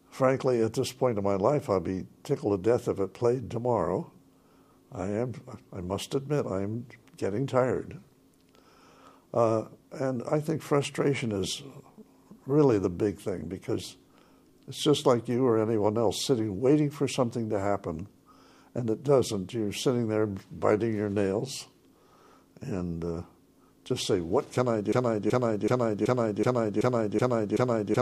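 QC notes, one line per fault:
24.92 s to end (28.01 s), broken-record loop: a 0.38 s fragment repeats exactly, back to back, eight times until the clip ends, replacing whatever should have played there. This likely comes from the player, encoder or stream stalling and resending the last fragment it held.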